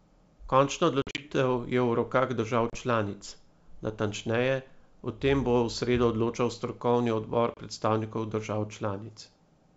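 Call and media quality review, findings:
Packet loss on an ADPCM call, G.722 wideband path. Hard-edged silent gaps, then slightly distorted speech until the decoder's predictor and step size resync. At 1.02–1.25 s, 100 ms lost in bursts over 160 ms (longest 50 ms), which fits about ten packets. At 2.70–2.77 s, after "rokah držav" and before "članic natančneje o tem", 30 ms lost. At 7.54–7.59 s, before "predstavnikov držav", 30 ms lost.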